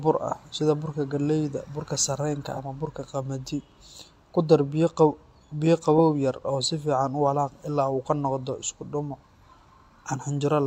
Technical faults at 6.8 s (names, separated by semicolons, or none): none